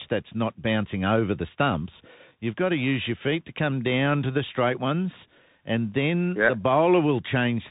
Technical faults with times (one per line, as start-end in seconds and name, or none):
0.00-7.71 Bluetooth CVSD headset codec